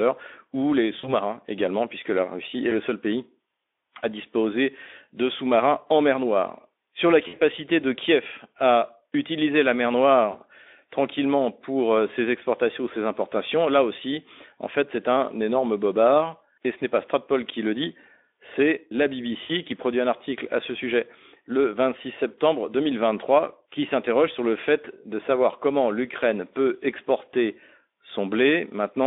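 VoIP packet loss concealed by the speech codec: lost packets at 0.99, 2.69, 7.27, 10.31 and 19.43 s force the decoder to extrapolate, smearing the speech into brief buzzy, fading tones.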